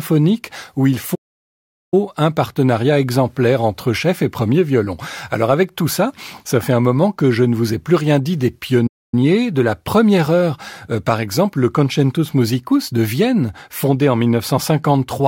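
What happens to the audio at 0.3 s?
Nothing goes wrong at 0.3 s; the speech plays through that moment intact, with no dropout, click or distortion.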